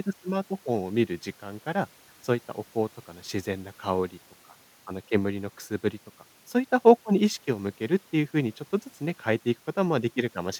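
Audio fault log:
No faults heard in the speech at any point.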